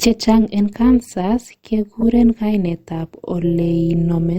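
All the way through, the speech carries an overlap-add ripple: a steady buzz, about 6 dB deep, cycling at around 200 Hz. Whatever chopped the audio into windowed frames and stitched them back together used an overlap whose windows don't add up to a flat gain, so the level swells and dips once per frame. At that rate it comes across as a metallic buzz with extra tones around each note, sitting on top of everything.

Then from 2.01 to 2.03 s there's a corrupt frame decoded, or really a couple of frames' worth. Bits got flipped inside the compressed data, and the decoder went ahead and played it, misreading gains and codes so energy landed at the wrong frequencies. For that roughly 20 ms stretch you get a short glitch that doesn't belong to the speech.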